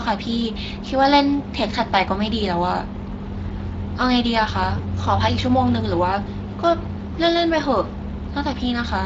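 Speex codec damage runs through the whole clip and is plainly audible. This CELP coder has too few bits to model the excitation, so the speech comes out hoarse and grainy.
The degree of damage fits a bitrate of around 20 kbps.

VoIP packet loss concealed by the speech codec occurs from 4.77 to 4.82 s. A brief concealed dropout fits a single lost 20 ms frame. The decoder extended its last pitch and filter at falling gain, giving a short stretched sound that fades and stays weak briefly as normal decoding resumes.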